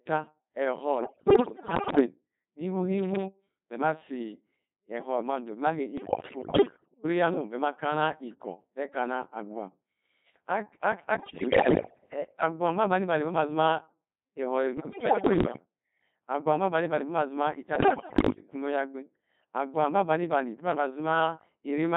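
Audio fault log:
Throughout: Codec 2 vocoder at 2.4 kbit/s, heavily degraded. The speech is rebuilt from pitch, voicing and envelope parameters, so it sounds buzzy and robotic. A spectrogram shows neat, regular harmonic stacks with smeared envelopes, and the waveform no longer resembles the original.
1.00–2.06 s, 5.98–7.04 s, 11.20–12.12 s, 14.78–15.65 s, 17.76–18.42 s: bit errors on digital voice radio, at roughly 10 to 15 percent. Corrupted frame parameters make the voice leap in pitch and level and break into warbles and bleeps. On a spectrogram, harmonics jump erratically from frame to frame. The waveform shows abrupt level steps.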